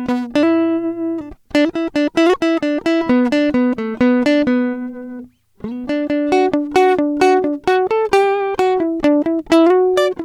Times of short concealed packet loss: none

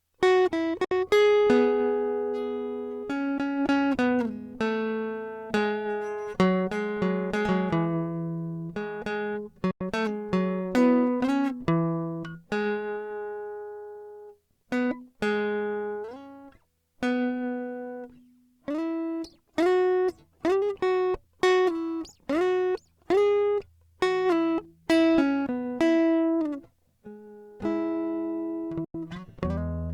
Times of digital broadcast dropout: 0.84-0.91, 9.71-9.81, 28.84-28.95

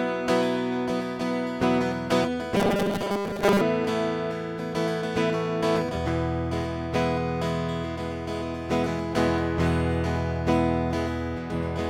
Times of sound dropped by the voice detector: none

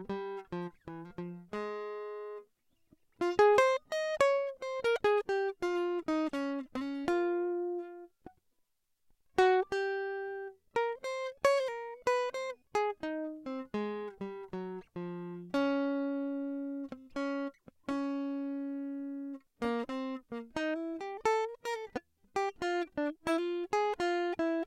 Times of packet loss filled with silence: none

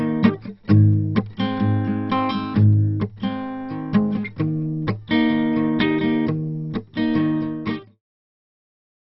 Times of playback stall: none

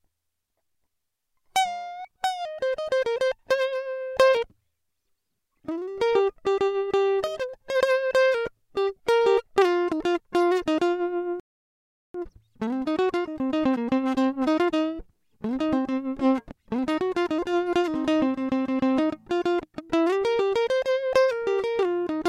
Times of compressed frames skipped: none

